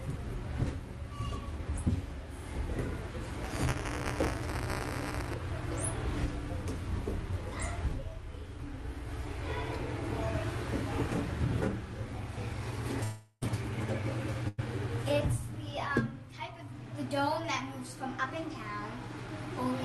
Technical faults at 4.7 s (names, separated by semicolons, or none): buffer tearing